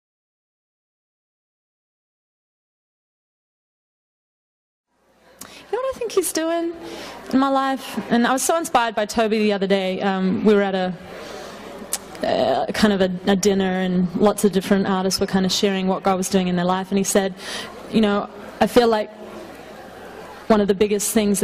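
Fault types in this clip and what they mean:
No faults detected in this audio.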